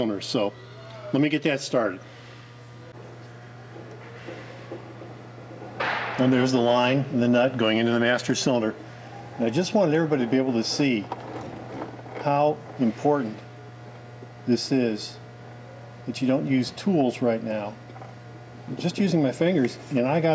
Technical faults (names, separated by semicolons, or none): none